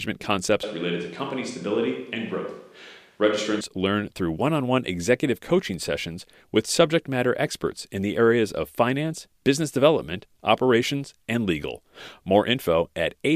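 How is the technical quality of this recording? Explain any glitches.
One glitch is audible. From 0.63 to 3.61 s, just before "learn through one on", there is a switch to a distant microphone. The close microphone likely dropped out, leaving a far pickup that sounds hollow, thinner in the bass and about 5 dB quieter. The waveform shrinks abruptly, and the spectrogram shows weaker lows and smeared reverberant tails.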